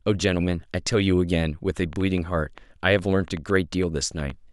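From 1.77 to 4.31 s, a train of clicks ticks over the speech. About fifteen sharp pops arrive unevenly, roughly five per second, standing above the voice. Likely interference.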